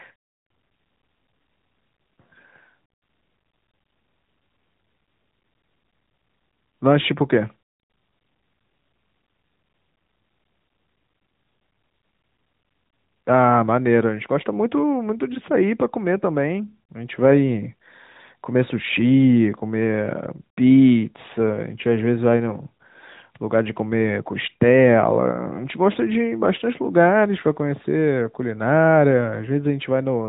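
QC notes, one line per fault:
No faults found; the speech runs through the AMR narrowband mobile codec (AMR-NB) at 12.2 kbps, which passes nothing above 3.8 kHz and leaves only light coding texture.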